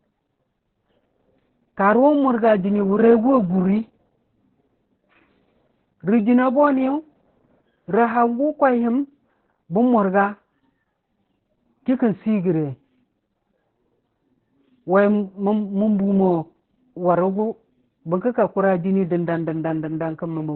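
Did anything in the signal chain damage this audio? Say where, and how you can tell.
Yes, at the codec. Opus voice compression runs throughout. Nothing sounds above 4.3 kHz, and the speech is muffled and hoarse, pointing to narrowband SILK near 8 kbps.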